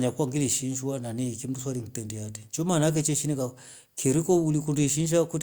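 No technical faults can be heard anywhere in the speech. Nothing in the recording needs a time marker or further comment.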